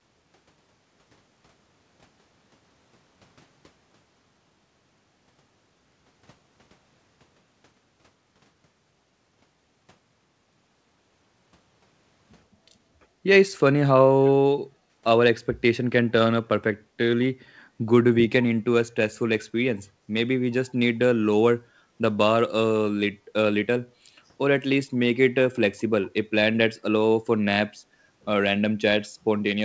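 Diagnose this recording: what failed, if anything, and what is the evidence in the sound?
The echo canceller in the call processing stage clamped the microphone while the far end was playing, gating the background from 12.47 to 13.24 s. For roughly 0.7 s the room tone dips by about 11 dB, then recovers when the canceller releases. The band stops at 8 kHz, consistent with a G.722 call path.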